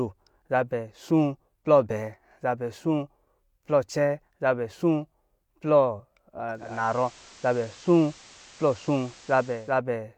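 At 6.51 s the speech shifts character. This is digital radio blending to analogue. The receiver lost its digital stream and cross-faded to the station's FM broadcast over about 0.43 s. Hiss rises, sitting around 25 dB below the speech. The level changes by about 1 dB. The FM sound holds until 9.81 s. Then the receiver fades back to the cleaner, fuller digital signal.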